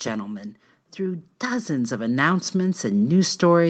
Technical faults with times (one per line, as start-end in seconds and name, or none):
0.96-3.69 automatic gain rising